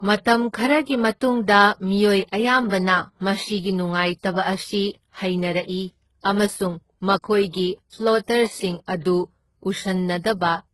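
Throughout the speech there is transcoding between lossy codecs, likely a very low-rate HE-AAC encode re-encoded as Opus at around 32 kbit/s. Opus spends bits preserving the earlier artefacts and adds its own, and nothing remains above 12.1 kHz.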